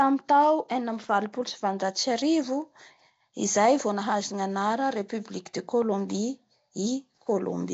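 Throughout, the speech likely went through Nellymoser compression at around 32 kbps, leaving a hissy, smeared, underwater quality and nothing above 7.8 kHz.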